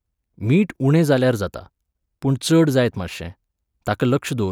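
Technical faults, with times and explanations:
No technical faults can be heard in this speech recording.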